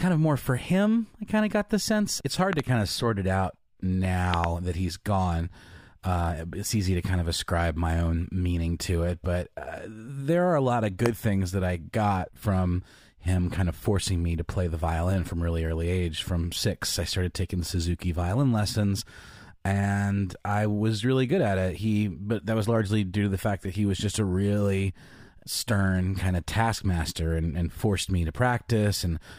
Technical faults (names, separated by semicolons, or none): loud pop